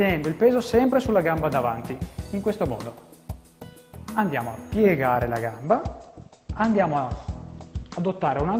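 At 5.64 s a call bitrate drop sets in and lasts to the end of the clip. The call's bandwidth estimate fell, so the encoder was pushed from 40 kbps down to 14 kbps and held at that floor for about 2.4 s. With so few bits it quantises more coarsely and narrows its coded band from 20 kHz to 8 kHz. The sound loses its top end, turning muffled, with a rough, watery texture.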